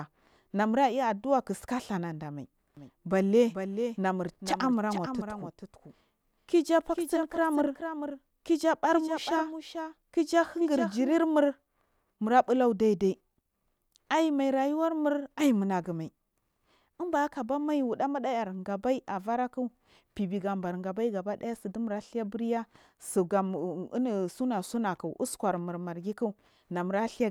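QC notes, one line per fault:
2.77 to 11.13 s, doubled audio track: the speech gets a second full-band copy trailing roughly 0.4 s behind and around 10 dB quieter, with no room tail on it, switching on and off abruptly; likely a slower second capture path or misaligned edit.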